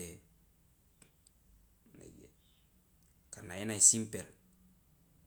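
There are no technical faults to describe in time order.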